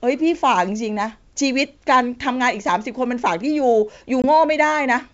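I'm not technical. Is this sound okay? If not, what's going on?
No. At 4.22 to 4.25 s on this wideband G.722 call, there is packet loss on an ADPCM call. A 20 ms piece of speech, about one packet, drops out as an abrupt silent gap. The receiving decoder's running predictions then no longer match the sender's, so the speech comes back with brief, slight distortion before settling.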